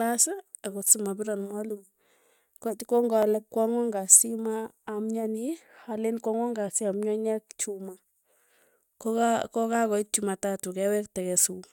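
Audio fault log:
0.88–0.90 s and 3.23 s, repeated buffer. A tiny slice of sound is played again because fresh audio did not reach the device in time. At 0.88 s the same piece loops for about 20 ms, which fits a 5 ms buffer heard five times. The hard joins at roughly 200 Hz make a brief buzz. At 3.23 s one extra play gives a single click. Little or no audio seems lost.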